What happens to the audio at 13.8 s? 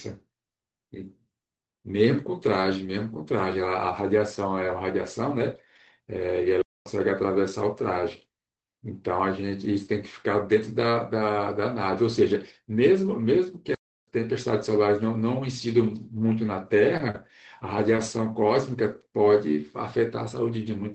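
At 13.8 s the audio is inside a playback stall running from 13.75 to 14.08 s, a gap of about 0.33 s. The speech halts abruptly mid-flow, leaving dead silence, then resumes. The likely cause is the player running out of buffered data, or its playback thread being blocked, so nothing reaches the output until it recovers. On a waveform this shows as a flat line with hard edges. A spectrogram shows a fully blank vertical band across all frequencies.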